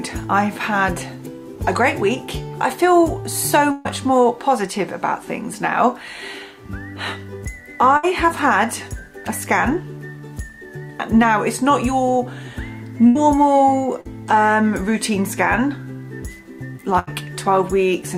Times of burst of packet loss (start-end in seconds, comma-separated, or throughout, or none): 3.71-3.87, 7.97-8.05, 13.07-13.17, 16.99-17.09